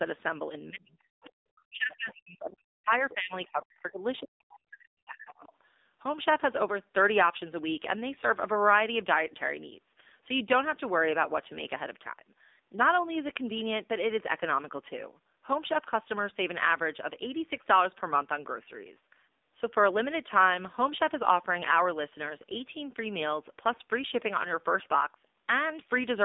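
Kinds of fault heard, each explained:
AMR narrowband mobile codec: The speech was carried by the AMR-NB mobile codec at a low bitrate, which fits 7.4 kbps. Its vocal-tract model, driven by sparse pulses, leaves plainly audible buzzy, synthetic damage. Nothing passes above about 3.8 kHz, and the line band runs roughly 250 Hz to 3.7 kHz.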